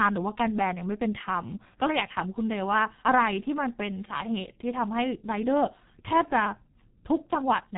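From start to finish the speech carries G.723.1 codec damage, and it is heavy. Nothing survives above 3.8 kHz, so the top of the spectrum is simply absent and the sound comes across muffled and boxed-in. The codec models the voice in coarse 30 ms frames and refreshes that model slowly, which leaves the tone hoarse and smears consonants into one another. The degree of coarseness points to the 6.3 kbit/s mode.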